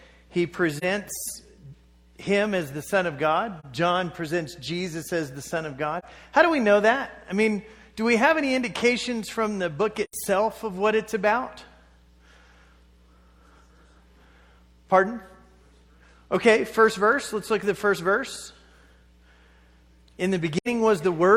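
The audio drops into brief soft-edged gaps, which is AAC frame loss with muting: the decoder zeroed missing frames, so the overlapping windows fade out and back in. Hear it at 0.77, 3.60, 5.99, 10.04 and 20.57 s, the last two longer, suggesting two lost frames rather than one.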